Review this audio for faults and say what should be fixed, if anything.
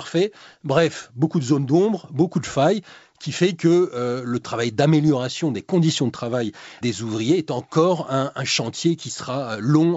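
No faults turn up in this audio, so nothing needs to be fixed.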